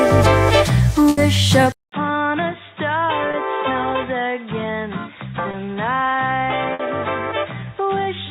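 At 1.09 s a burst of packet loss begins and runs to 1.19 s. Several packets in a row never arrived in time. The receiver held the last sound for about 80 ms and let it fade, so a held buzz or hiss replaces the real audio. When sound returns, about 80 ms of the original is gone.

At 1.72 s the input switched to a poorer device, likely a change of microphone or a headset call profile. A silence of 200 ms marks the switch. After it, nothing reaches above 3.8 kHz, so the sound turns dull and boxy. The level drops by roughly 10 dB. A new background noise sits roughly 35 dB below the signal. This narrow, quieter tone lasts to the end.

At 3.31 s and again at 5.51 s there is a short concealed packet loss, each spanning 40 ms. In each, about 20 ms of audio went missing. The receiver filled the hole by extending the preceding sound, then blended back in. Each one is heard as a brief smear or wobble. 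A short sound can drop out there.

At 6.73 s a second burst of packet loss runs to 6.81 s. About 60 ms is lost and filled by a fading continuation of the last sound. The sound then resumes further on, with that stretch missing.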